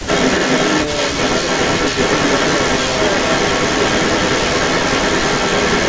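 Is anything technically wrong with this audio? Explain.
Yes, there is an echo leak running through the whole clip, from 0.0 to 5.9 s. The likely cause is a far end playing the call on a loudspeaker, where the echo canceller failed to strip out what its microphone picked up and sent that back into the call. The result is a second copy of the speech trailing the original by about 396 ms, and roughly 5 dB louder than it, so the echo competes with the speech throughout.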